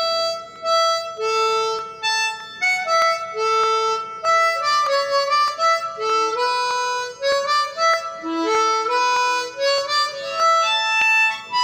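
From 0.56 s to 11.63 s, a click recurs steadily, about every 0.62 s. There are roughly twenty of them, evenly spaced across that span. The pattern matches clock drift buffer slips. The likely cause is two devices running on separate clocks that disagree by a few hundred parts per million. The buffer between them drifts until a handful of samples is dropped or repeated. Each slip breaks the waveform briefly, producing a click.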